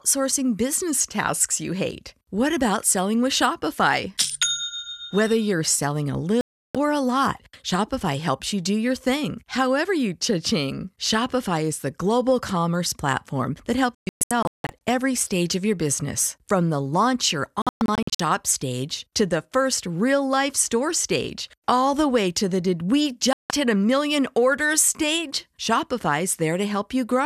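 Digital broadcast dropouts hit the speech four times. The receiver lost good frames and muted. There are clean gaps at 6.41–6.75 s and 23.33–23.51 s. There are scattered short holes at 13.95–14.70 s and 17.62–18.20 s. The missing audio never returns.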